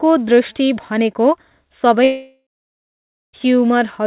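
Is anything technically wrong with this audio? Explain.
Yes. From 2.04 s to 3.35 s the speech stops: the last sound smears into a fading buzz, then about 0.9 s of silence follows before speech resumes with roughly 1.3 s missing. This is likely a long network dropout, with the receiver concealing the gap and then giving up. The call path's cut-off at 4 kHz fits G.711 mu-law at 64 kbps.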